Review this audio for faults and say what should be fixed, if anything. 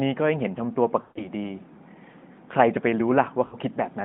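Lost AMR speech frames at 1.02–1.28 s and 3.46–3.55 s: the decoder repeats the last good pitch and vocal tract settings at falling gain, so the sound smears and fades rather than cutting abruptly to digital silence. The first gap fits about seven lost 20 ms frames. Preventing it requires better radio coverage or stronger channel error protection on the mobile link.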